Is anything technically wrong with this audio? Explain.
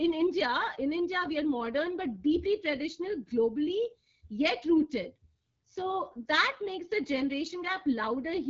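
Yes. The whole clip carries AMR wideband (HD Voice) codec damage, and it is plainly audible. The codec rebuilds speech from a pulse-excited model of the vocal tract up to 6.4 kHz, then fills the band above with shaped noise. Nothing is left above about 7.4 kHz. Here the speech sounds rough and raspy throughout. That points to one of the two lowest AMR-WB rates, which fits 8.85 kbit/s.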